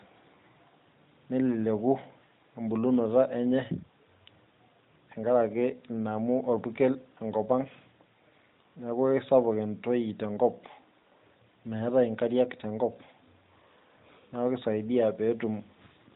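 No technical faults can be heard in this speech.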